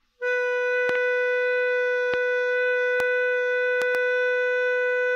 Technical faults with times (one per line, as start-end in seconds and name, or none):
0.89-0.97 loud pop
2.14-2.16 loud pop
3.00-3.02 loud pop
3.82-3.97 loud pop